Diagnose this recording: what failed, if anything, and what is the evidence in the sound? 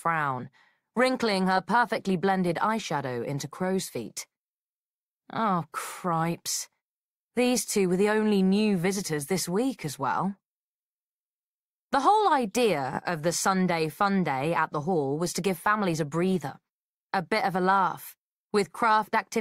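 A run of compressed frames was repeated somewhere in the codec or storage path: at 12.93 to 12.99 s, a 20 ms slice plays three times in a row, a brief stutter that fits one frame sent twice more, stretching the audio by 40 ms.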